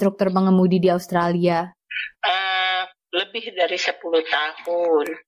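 No technical faults can be heard anywhere in this audio.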